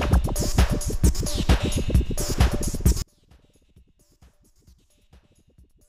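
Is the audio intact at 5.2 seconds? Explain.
No. From 3.02 s to the end, one channel of the stereo pair has likely been flipped in polarity, so summing to mono cancels everything the two channels share. At 5.2 s the level has fallen by about 35 dB, leaving only a faint residue.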